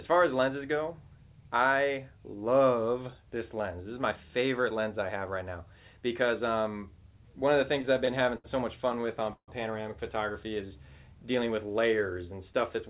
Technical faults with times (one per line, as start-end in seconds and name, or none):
7.82-8.46 repeated stalls (stutter)
8.92-9.50 repeated stalls (stutter)
10.32-10.68 jitter buffer slow-down